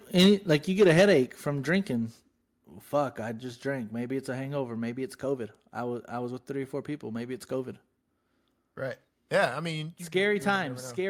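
From 0.18 to 1.13 s, the loudest speech peaks crackle harshly, with their tops flattened. This is microphone overload, likely from input gain set about 6 dB too high. At 0.26, 1.26 and 10.56 s, speech and background drop suddenly, by about 2, 4 and 4 dB. The microphone volume was likely stepped down by the call software.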